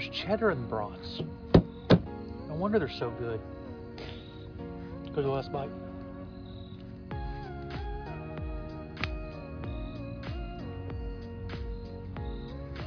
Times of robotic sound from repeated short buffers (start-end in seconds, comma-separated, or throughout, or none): none